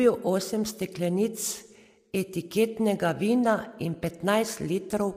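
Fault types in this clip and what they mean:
Low-delay AAC compression: The speech was likely coded with a low-delay AAC mode such as AAC-ELD, at a rate that fits roughly 32 kbps. At that rate the bits run thin. The damage is plainly audible throughout: the voice sounds rough and grainy, noise fills the gaps between harmonics, and the upper band sounds dulled or artificial.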